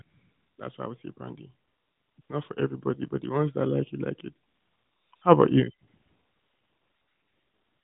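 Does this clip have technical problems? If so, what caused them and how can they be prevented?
Yes. AMR comfort noise fills the pauses in this speech clip, at 0.02 to 0.58 s, 1.68 to 2.18 s, 2.22 to 2.30 s, 4.48 to 5.12 s, 5.16 to 5.22 s, and from 5.88 s to the end. In each gap the sending phone decided nobody was talking and stopped sending speech frames. The receiver then made up a smooth, steady hiss from a rough sketch of the background. The real room sound drops away and this flat noise switches in and out. The two short gaps, 80 ms and 60 ms, make brief flickers between words. The narrowband codec itself adds only light colouring, which fits its highest-quality mode. To prevent this, turn off discontinuous transmission on the sending side, or capture the audio before the phone network path.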